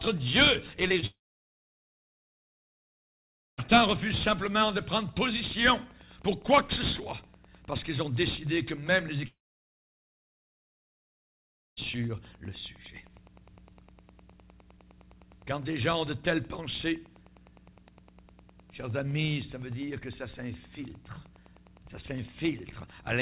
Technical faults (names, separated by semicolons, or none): Wi-Fi interference; short concealed packet loss; long network dropout